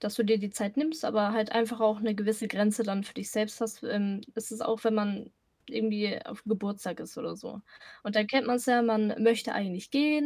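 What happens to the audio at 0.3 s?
Nothing goes wrong at 0.3 s; the speech plays through that moment intact, with no dropout, click, distortion or other fault.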